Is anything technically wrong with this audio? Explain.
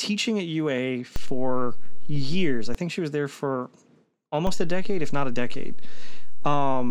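Yes. There's a DC step at 1.16 s, right before "think she was there", where the waveform's zero line jumps by about −17 dBFS and then drops back at 2.75 s. It jumps again at 4.47 s and holds to the end. Each shift gives a low thump under otherwise unchanged speech.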